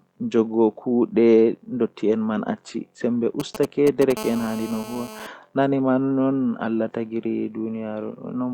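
From 3.40 to 4.12 s, GSM signalling bursts: a nearby 2G phone's short radio bursts are rectified, producing galloping ticks and brief 217 Hz buzzes roughly 10 dB below the speech. From 4.17 to 5.27 s, GSM phone buzz: the phone transmits in bursts 217 times a second, giving a steady, raspy harmonic buzz about 14 dB below the speech.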